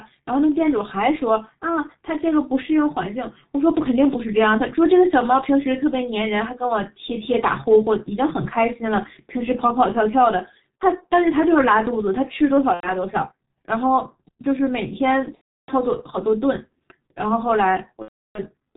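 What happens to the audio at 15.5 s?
From 15.35 to 15.71 s there is VoIP packet loss concealed by the speech codec. About 330 ms of data is missing, and the decoder keeps extrapolating its last pitch and spectral envelope while lowering the gain. The result is a brief stretched, fading sound, after which the codec mutes from the third lost frame in a row, and the sound stays weak for a moment after the signal returns.

Under this, as across the whole clip, the heavy G.723.1 codec at 6.3 kbit/s removes everything above 4 kHz and updates its voice model only every 30 ms. That leaves the speech muffled and hoarse, with smeared consonants, which sets it apart from a simple low-pass filter, where the sound would be dulled but clean.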